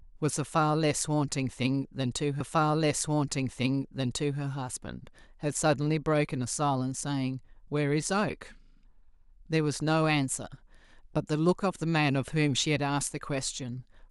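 At 2.39 s a blip, then 2.0 s of speech plays again until 4.39 s: a stream segment repeated, the player queuing it twice.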